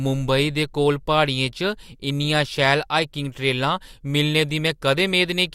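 Listening closely to the recording turned up nothing that stood out as a technical problem at any point.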